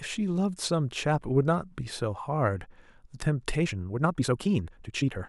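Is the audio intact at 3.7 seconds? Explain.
No. A time-stretched section runs from 3.57 s to 5.29 s, where the speech suddenly plays about 1.74 times faster, rushed, likely from software dropping short pieces to shorten it. Unlike a sped-up playback rate, the pitch stays unchanged.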